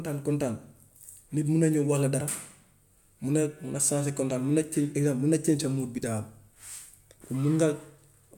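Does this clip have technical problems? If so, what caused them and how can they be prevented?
No, nothing technical jumps out in this bit of speech, so there's nothing here that needs fixing or preventing.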